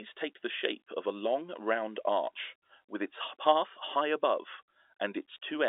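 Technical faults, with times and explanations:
No technical faults can be heard in this clip.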